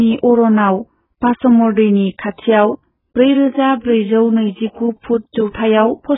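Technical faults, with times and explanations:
Throughout, AAC compression: the speech sounds dull and smeared, with nothing above 3.8 kHz, likely from AAC-LC at a very low bitrate around 8 kbps.
2.34 s, 4.72 s and 5.50 s, pre-echo: a short hiss leads each sharp onset by about 45 ms, because block-spread quantisation noise fills the quiet moment before the attack.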